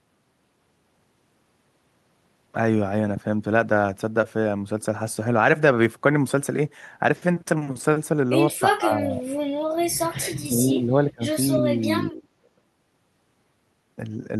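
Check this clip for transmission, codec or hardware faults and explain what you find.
One fault shows up three times: speech suppressed in double talk, at 8.71–9.33 s, 10.24–11.24 s and 11.59–12.48 s. The voice sinks by around 30 dB in places, likely because an echo canceller could not separate its own talker from the overlapping far-end echo and ducked both.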